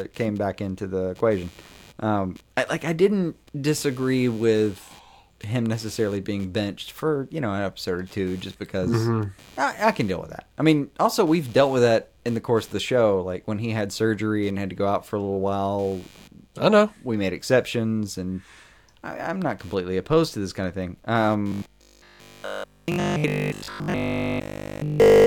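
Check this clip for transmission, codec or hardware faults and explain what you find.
Two faults show up in the speech.

Computer activity noise runs the whole way through: a buzzy, pulsing chatter at around a hundred pulses a second, sitting roughly 30 dB under the voice. It comes from processor or graphics load shifting the ground the audio circuit shares, so it follows the machine's activity, not the talking.

Robotic sound from repeated short buffers takes over from 21.48 s to 25.26 s, right after "this kind of thing". The voice turns into a rigid, metallic 50 Hz buzz that only loosely tracks the speech, with essentially all of that stretch affected. The likely cause is a short chunk being replayed over and over because fresh audio isn't arriving, and that 50 Hz rate fits a 20 ms buffer.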